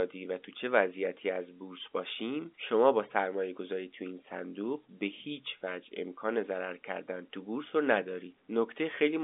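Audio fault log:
Nothing stood out on listening to this telephone-band speech, which carries nothing above about 3.7 kHz, as expected of a fixed-line G.711 path.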